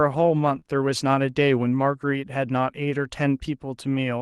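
From about 0.55 to 0.57 s, a lost packet rebuilt from error correction plays as a brief rough, noisier stretch with no gap, which points to one packet recovered from a low-bitrate copy. Just after, from about 0.59 to 0.63 s, a short concealed packet loss sounds like a smear or wobble, with roughly 20 ms of sound extrapolated from what came before rather than decoded from any copy.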